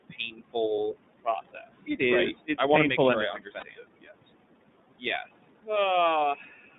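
Noise suppressor artifacts run throughout. The room noise sits about 13 dB below the speech, and the suppressor pulls it down by up to about 21 dB between phrases, so the background sinks between phrases and rises under the words.

The iLBC codec also runs throughout. The band stops at 3.7 kHz and starts at 150 Hz, and the speech sounds rough and synthetic. The coding damage is plainly audible, which fits the 30 ms, 13.33 kbps mode.

The suppressor cuts speech from 0.00 to 0.56 s and from 0.93 to 2.01 s, by about 21 dB. Soft sounds come out swallowed.

Lost iLBC frames cause a single 30 ms gap at 0.76 to 0.78 s. It is filled with a brief buzzy, held vowel, and the voice returns at once.

Speech is cut again from 3.34 to 4.27 s, right after "to make sure I", by about 20 dB. Much of the stretch sounds faint.

A lost frame follows "to make sure I" at 3.60 to 3.63 s. It gives another short buzzy hold before the voice recovers.

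Further speech cuts come at 4.99 to 5.28 s, by about 18 dB, and at 6.35 to 6.63 s, by about 11 dB. Word edges there sound thinned.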